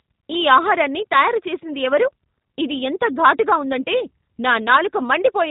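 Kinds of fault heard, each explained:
G.729 codec: The speech is rebuilt from a modelled vocal tract filter, a pitch predictor and a few sparse pulses per short frame, so it comes through intelligible but plainly rough and synthetic, with nothing above 3.8 kHz. The sound points to an 8 kbit/s G.729 stream. Unlike a simple low-pass filter, which only dulls the top end, this also leaves a buzzy, artificial grain in the voice itself.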